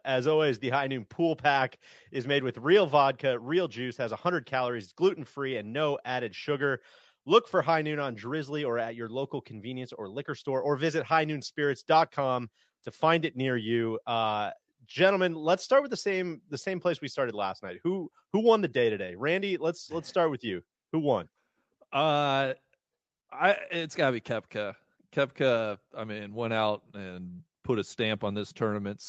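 No technical faults can be heard in this speech.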